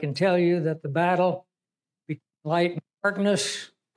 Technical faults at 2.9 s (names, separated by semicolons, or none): none